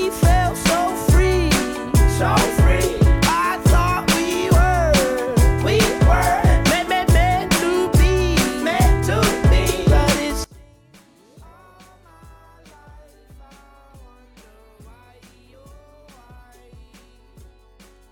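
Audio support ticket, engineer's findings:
From 10.44 s to end: mono sum collapses, level drops by about 30 dB, centre content nearly gone, faint residue left. Likely cause: one channel inverted, i.e. reversed polarity on one leg of the stereo path. Common L/R material cancels on summing; only the channel difference survives. Check wiring or the polarity setting on that channel from 10.44 s onward.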